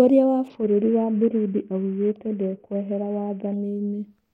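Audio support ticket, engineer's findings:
Bluetooth SBC bit pool drop, 0.48 to 3.54 s. Speech turns dull and gritty as the upper sub-bands starve. Likely a congested link forcing the encoder down, fitting a bit pool cut from 31 to 6, near 55 kbps, with coarse quantisation.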